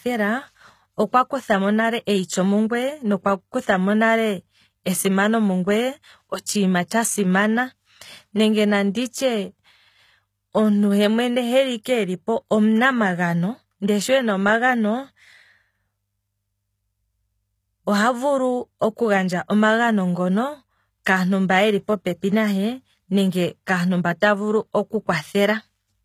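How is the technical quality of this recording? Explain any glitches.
The recording has plainly audible codec damage across the whole clip, plus one brief smeared attack.

Throughout, the treble sounds synthetic. Sibilants come across gritty and metallic, and nothing is present above 14.9 kHz. This points to HE-AAC compression at a low bitrate, likely around 20 kbps. The codec coded only the lower spectrum and rebuilt the highs by copying lower bands upward under a coarse envelope, so the upper harmonics no longer line up with the real ones.

From 6.88 to 6.91 s there is pre-echo: a short hiss leads into a sharp attack and blurs its onset. The transform coder spread its quantisation noise evenly across a block. Because the loud onset fell late in that block, noise sized for it also filled the quiet moment just before, smearing the attack over about 24 ms.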